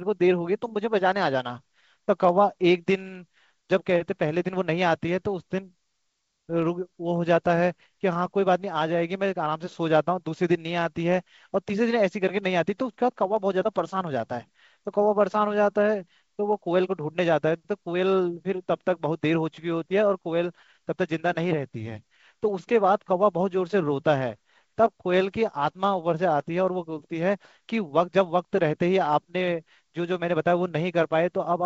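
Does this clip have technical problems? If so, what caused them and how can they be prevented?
No, there's nothing here that needs fixing or preventing; the speech simply comes through the G.722 wideband telephone coding at 64 kbit/s, which leaves at most a faint trace on the sound.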